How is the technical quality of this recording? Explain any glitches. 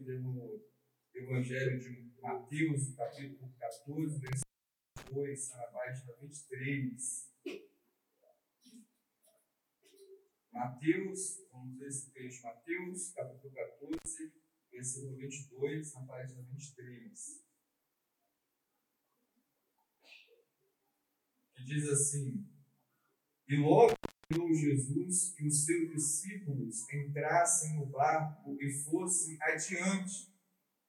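The recording has three dropouts from an intermittent contact, at 4.27–5.10 s (open about 0.54 s), 13.93–14.11 s (about 84 ms) and 23.88–24.36 s (about 0.36 s). A loose cable or plug briefly breaks the signal path, so the sound cuts out with crackle at each edge, leaving faint hiss while the connection is open.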